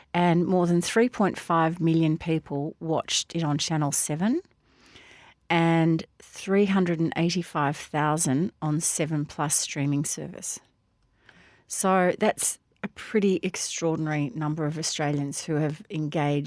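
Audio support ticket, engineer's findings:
No faults found on listen-through of the speech capture; nothing to escalate.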